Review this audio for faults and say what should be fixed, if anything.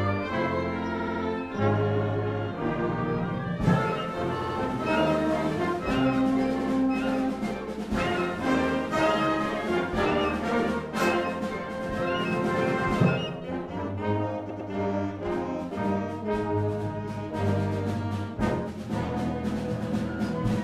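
Repeated frames cause a stutter at 0.98–1.22 s, 4.40–4.56 s, 6.60–6.68 s and 14.49–14.70 s. A short block of compressed audio plays again. The first three blocks are 78.4 ms long, repeated three, two and one extra times. The last is 104.5 ms, repeated twice. That fits runs of roughly 26 ms frames written more than once. The clip grows by the repeated time. To prevent it, make the writer or sender drop duplicate frames by sequence number.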